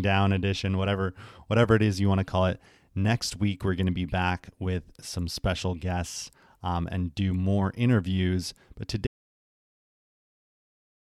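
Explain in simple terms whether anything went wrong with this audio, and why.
Something did go wrong. At 9.07 seconds the speech stops in mid-flow and never comes back. The last 2.1 seconds or so, up to the end of the clip, are dead silence. This is an audio dropout to silence. There is not even the faint background hum of the room. That points to the input being lost, likely through a disconnected device, a failed link or an accidental mute, while the recorder kept writing nothing but silence. Whatever was said after that point is gone.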